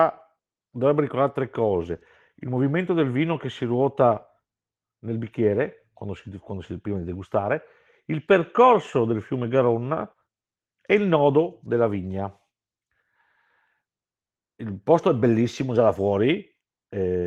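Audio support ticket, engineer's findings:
No faults found in the speech path; the Opus voice compression shows only light coding damage.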